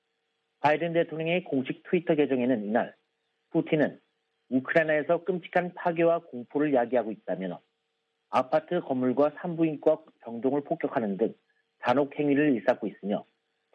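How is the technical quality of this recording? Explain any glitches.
No glitches turn up anywhere in the recording. It has no dropouts, breaks or other audible faults to explain.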